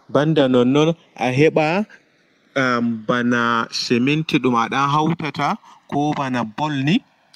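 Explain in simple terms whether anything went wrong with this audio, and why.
Two things went wrong. First, channels drifting apart: the two channels were recorded by devices running on separate clocks that disagree by a small amount, so the delay between them slowly grows, reaching roughly a millisecond and a half by the end. When the two are mixed into one, certain frequencies cancel, and those cancellations creep steadily through the sound. You hear this throughout the clip as a slow, swirling flanging effect.

Second, three moments show a lost packet rebuilt from error correction. Pieces of the stream went missing in transit, but each following piece carried a lower-quality backup copy, and the player used those copies instead. There is no silence or dropout. Instead, the sound turns rougher and noisier for 120 ms at 0.37 to 0.59 s, for 20 ms at 3.85 to 3.87 s (between "am ɓana" and "ɗum a"), and for 60 ms at 4.85 to 4.95 s.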